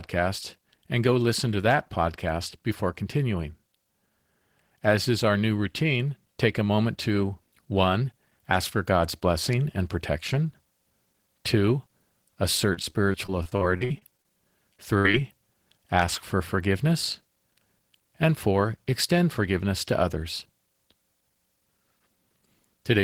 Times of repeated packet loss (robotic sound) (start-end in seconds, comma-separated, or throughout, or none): 12.73-14.25, 14.73-15.14